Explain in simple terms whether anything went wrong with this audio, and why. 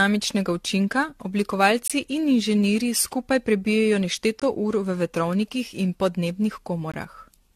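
Two things went wrong with this speech recording.

The first is generation loss. The recording was most likely squeezed with a lossy AAC codec, unpacked, and squeezed again, around seven times over. Each round throws away a little more detail in slightly different places, and the damage piles up. The whole clip sounds swirly and hollow, the starts of sounds are blurred rather than crisp, and there is nothing at all above 14.1 kHz, so the top end sounds dull.

The second is a gap between chunks. The audio was handled in 2.5-second pieces, and each time one piece handed over to the next, a sliver of silence was left in between. No sound goes missing, but the flow is cut for about 20 ms each time, at 1.88 to 1.90 s, 4.40 to 4.42 s and 6.92 to 6.94 s. Each one is a tiny dropout, and they come at a steady rhythm.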